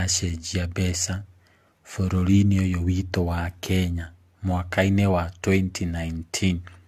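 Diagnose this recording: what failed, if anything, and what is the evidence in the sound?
The trouble sits at the codec stage, and it runs through the whole speech clip: generation loss. The top end stops dead at 14 kHz, and the sound is swirly and hollow, with consonant attacks smeared, more so than a single encode at this rate would leave. That points to an AAC-LC chain at around 64 kbit/s, likely decoded and re-encoded about four times, each pass quantising on a shifted frame grid so the noise and spectral holes pile up.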